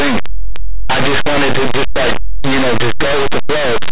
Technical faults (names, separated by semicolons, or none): linear audio read as companded